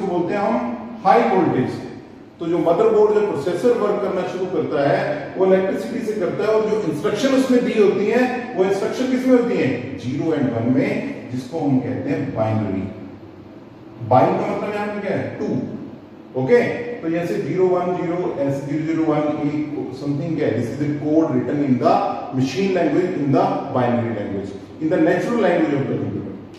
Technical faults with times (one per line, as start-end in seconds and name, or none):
none